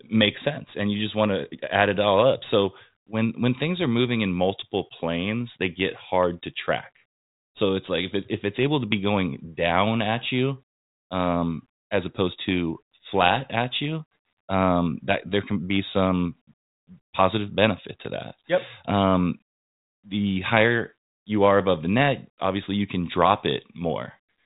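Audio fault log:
No faults heard anywhere in the speech.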